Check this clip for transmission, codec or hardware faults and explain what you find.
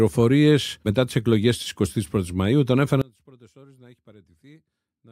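One fault is present. From 3.02 s to the end at 5.12 s, the speech suddenly collapses, about 29 dB quieter, to a faint residue. This likely comes from one channel inverted: with reversed polarity, the shared centre content cancels on mono summing. The waveform shrinks abruptly, and the spectrogram darkens.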